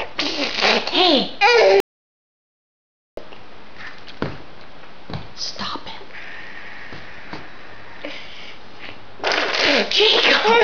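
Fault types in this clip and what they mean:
Audio dropout to silence: From 1.80 s to 3.17 s the sound just stops dead, cuts out mid-flow and comes back mid-flow, with the gap in between being silent rather than quiet room tone. That's about 1.37 s of material simply gone. The likely culprit is the input dropping out, through a device losing connection, a link failing or a mute getting hit, while the recorder kept writing silence the whole time.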